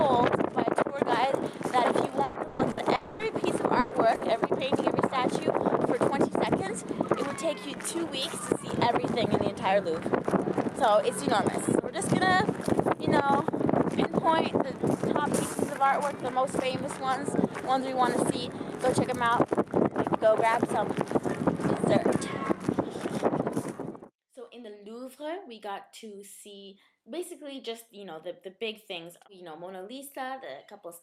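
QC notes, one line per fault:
2.23–2.38 s, 2.47–2.62 s and 2.71–2.80 s, burst of packet loss: three closely spaced gaps where the last sound is extended and turned down for about 120, 120 and 60 ms. Each resumes further on, so that much of the audio is skipped. A voiced sound becomes a short held buzz, a noisy one a fading hiss. These are brief, self-contained patches, far shorter than the dropout that follows.
2.95–3.22 s, long network dropout: a fill of about 240 ms in which the preceding sound is carried on as a decaying buzz or hiss. It never reaches silence, and the audio picks up later with that stretch gone. It is twice the length of the longest burst, which points to the stream likely stalling for a sustained period rather than losing a few packets.
3.79–3.94 s and 4.15–4.24 s, burst of packet loss: two more concealed gaps, about 120 ms and 60 ms, each a short held buzz or fading hiss followed by a jump ahead in the audio. 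Their short length and the quick return of sound set them apart from the dropout.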